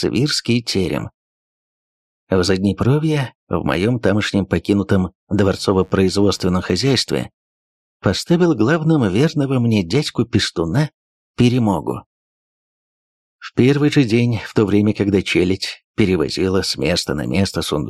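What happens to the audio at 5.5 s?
At 5.5 s the sound is overlaid by mains buzz, which runs from 5.37 s to 6.87 s. Sharp switching spikes, of the sort a dimmer, rectifier or missing shield lets in, arrive twice per 50 Hz cycle. That gives a 100 Hz pulse train whose harmonics stack up well into the kilohertz range. The result is a steady, raspy buzz sitting roughly 35 dB below the signal for that one-and-a-half-second stretch.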